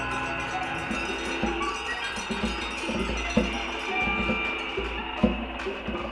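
The music runs without any audible technical fault.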